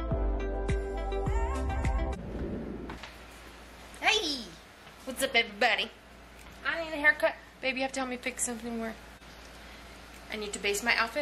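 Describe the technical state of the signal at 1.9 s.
At 1.9 s the signal is intact, with no dropout, distortion, glitch or other technical fault to be heard.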